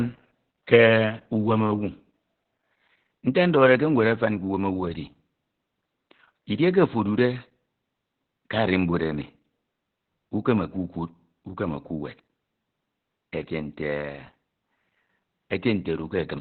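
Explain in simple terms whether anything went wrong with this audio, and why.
Opus voice compression affects the speech from the first second to the last, and the damage is heavy. The codec was squeezed so hard that it fell back to its narrowband SILK mode, which throws away everything above about 4.3 kHz. That is why the voice sounds muffled, like an old telephone line. The breathy detail is coded so roughly that the voice also comes out hoarse and a little robotic, which points to a very low bitrate.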